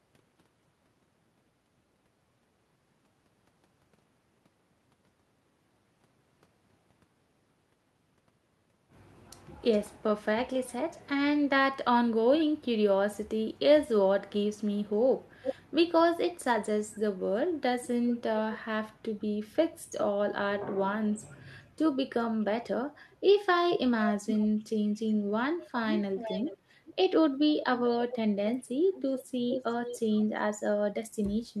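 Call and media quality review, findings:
Echo leak at 15.43–15.55 s, 16.91–18.58 s, 19.99–20.66 s and 23.7–30.19 s. A delayed copy of the speech trails the original by 412–420 ms. The brief scrap at 15.43 s and the 19.99 s stretch are fairly strong, 16.91 s is faint, and 23.7–30.19 s is a long, moderate-level run. Likely the far-end loudspeaker feeding its microphone, with that side's echo canceller leaving residual echo that was transmitted back.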